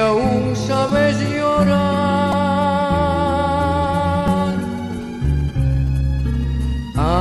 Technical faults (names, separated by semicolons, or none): repeated buffer; GSM signalling bursts; GSM phone buzz